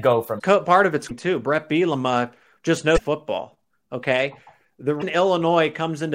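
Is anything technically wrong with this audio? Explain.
Yes. This speech clip has damaged data in a compressed stream at four points: 0.35–0.41 s just before "part of its", 1.06–1.11 s right after "part of its", 2.94–3.00 s, and 4.98–5.03 s. Each time, a stretch of the encoded bytes is corrupt, so the decoder misreads those frames, loses its place and hunts for the next valid frame header. For about 55 ms each time, this comes out as a brief chirp, squawk, click or short hole.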